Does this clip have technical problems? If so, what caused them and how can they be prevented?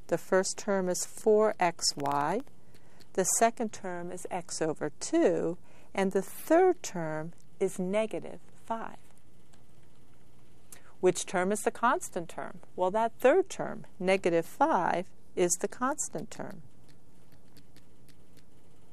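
Yes. From about 1.79 to 2.48 s there's a burst of processor overload crackle. The processor couldn't finish its audio buffers on time, so a run of deadlines got missed. Each miss dropped out as a tiny slice of silence with hard edges. With buffers that short, under a millisecond each, and around twenty missed, you hear a gritty tearing over the sound that clears once the load eases. To prevent it, use a larger buffer size or lighten the processing load.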